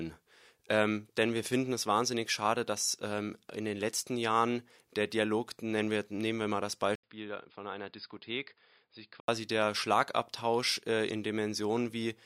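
After "nehmen wir mal das" at 6.95 s there's an 80 ms gap, then quieter, dull speech capped at 5 kHz until 9.28 s, likely the input switched to a poorer device.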